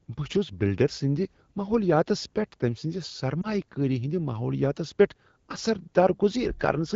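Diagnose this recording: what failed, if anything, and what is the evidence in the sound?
Lost AMR speech frames, at the radio link and decoder concealment stage: around 3.41 to 3.56 s the speech briefly dips or warbles. A single corrupted frame failed its checksum, so the decoder repeated the last good pitch and vocal-tract settings at lower gain. Unlike a buffer underrun, there is no hard gap or click.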